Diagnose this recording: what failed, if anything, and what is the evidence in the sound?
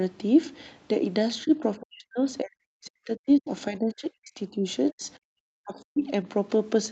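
Speech suppressed in double talk, at the call-processing stage. The talker's level collapses, by as much as about 40 dB, across 1.44–3.51 s, 3.68–4.66 s, 4.91–5.03 s, 5.22–5.41 s and 5.58–6.05 s. The echo canceller likely could not separate the near talker from loudspeaker echo while both sides spoke, so it attenuated both.

The other side's voice is leaking through, also at the call-processing stage. A brief scrap of a second voice appears from 1.46 to 1.51 s, about 20 dB below the talker, right as the first suppression begins. This is likely residual loudspeaker echo that the canceller failed to subtract from the microphone signal.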